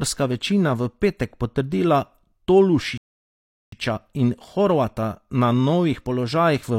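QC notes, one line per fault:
2.98–3.72 s, rebuffering stall: The speech drops abruptly into dead silence for about three quarters of a second, then picks up again at exactly the point where it broke off, with nothing skipped or repeated. The player's stock of downloaded audio ran dry, so playback froze until more data arrived and then carried on. No content is lost, but the clip runs roughly 0.75 s longer than it should.
6.11 s, bit error spike: A single sharp tick, very short and bright, sits on top of the speech without any relation to it. One bit flipped somewhere in memory or on a digital link, corrupting just one sample. That value leapt by a power of two and immediately snapped back. Because the jump is instantaneous and confined to one sample, its energy spreads across the whole spectrum and it is heard as a click.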